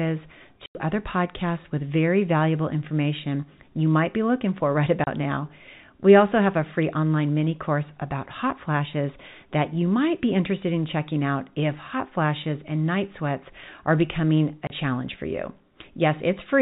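Speech clip, band-limited to 4 kHz by its telephone coding, with packet loss filled with silence: a 90 ms dropout at 0.66 to 0.75 s just before "other podcasts with very", and 30 ms holes at 5.04 s and at 14.67 s, between "night sweats are becoming" and "challenge for you". The gaps fit lost 30 ms packets replaced by silence. On a waveform they show as flat silent runs, and on a spectrogram as blank vertical columns with hard edges.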